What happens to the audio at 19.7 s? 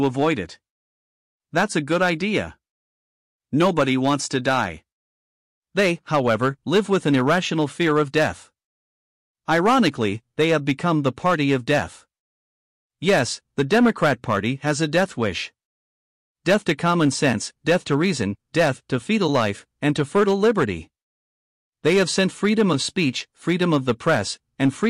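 At 19.7 s the speech runs on without any audible fault: no dropout, click, distortion or level change.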